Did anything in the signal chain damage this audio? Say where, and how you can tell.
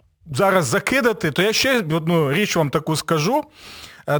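Yes. The sample-format conversion stage mishandled a rate change. A crude rate conversion runs throughout the clip: the speech was resampled without an anti-aliasing or interpolation filter, each output sample simply copying the nearest input sample, which fits a 32 kHz to 44.1 kHz step. The resulting error, at roughly -20 dB relative to the signal, repeats in a fixed pattern and creates inharmonic tones, heard as a gritty fizz that rides on the louder and brighter parts of the speech.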